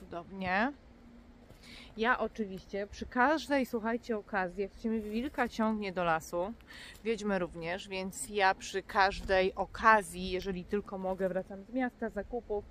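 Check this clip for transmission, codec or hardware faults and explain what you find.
No transmission, codec or hardware faults turned up in this clip.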